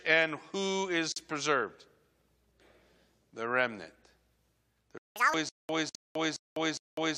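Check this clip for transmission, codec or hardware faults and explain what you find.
Several delivery faults are present, clustered in the second half of this speech clip.

A gap at a join of encoded pieces appears twice: separately encoded segments were spliced without trimming encoder delay and padding. Silence opens from 1.12 to 1.16 s, about 40 ms, right after "and who is", and again from 5.89 to 5.95 s, about 52 ms. Both have edges smeared by the codec before the sound resumes.

A playback stall, likely the player running short of data, silences the output from 4.98 to 5.16 s, roughly 180 ms, before the sound continues.

Catch-up at higher speed follows immediately, as the player resamples its backlog. From 5.16 to 5.34 s the audio runs at 2x speed, with pitch raised by nearly an octave, then returns to normal.

A stutter with silent gaps, likely from repeated stream stalls with retries, runs from 5.49 s to the end. 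A 209 ms fragment replays every 410 ms, separated by about 200 ms of digital silence, and the intervening audio is lost.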